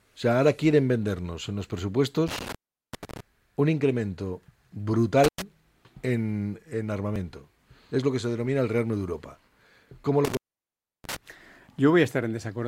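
Intermittent contact drops the audio out with crackling edges at 2.28–3.20 s, 5.24–5.42 s and 10.25–11.16 s, a loose cable or plug opening for about 390, 100 and 670 ms.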